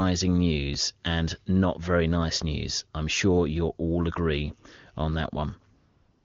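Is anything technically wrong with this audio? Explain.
Yes. AMR comfort noise runs from 5.77 s to the end at 6.24 s. The phone judged the talker silent, stopped sending speech frames for about half a second, and the receiver synthesised a smooth, steady hiss in place of the real background.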